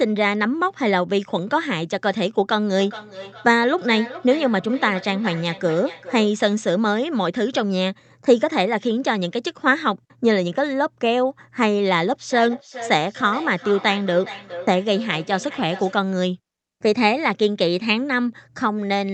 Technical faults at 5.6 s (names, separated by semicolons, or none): feedback echo between two devices